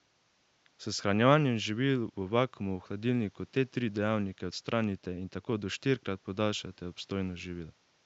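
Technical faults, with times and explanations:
No technical faults turn up here, just a faint bit of room noise sitting about 39 dB under the speech, which is simply part of where it was recorded.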